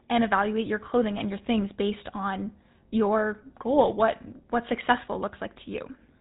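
Speech passed through the GSM full-rate codec for its whole length, with a plainly audible buzzy, gravelly roughness that fits the 13 kbps GSM scheme's pulse-driven vocal-tract model. On a spectrogram, energy stops at a hard ceiling near 4 kHz, with nothing above.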